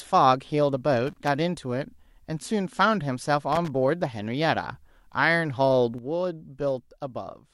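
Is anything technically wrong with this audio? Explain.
Yes, there are two kinds of fault in this speech clip. A loose connector crackle appears in two bursts, from 1.07 to 1.28 s and from 3.52 to 3.70 s. A worn or dirty contact is repeatedly making and breaking, chopping the signal, which gives an irregular scratchy crackle. Unlike a steady digital click train, the bursts are uneven and ragged.

At 5.98 s a sudden gain jump drops the level by about 7 dB and holds there until the end. Speech and background noise fall together in one step rather than fading, likely from a gain setting applied without a ramp. That instant, lasting shift sets it apart from gradual compression.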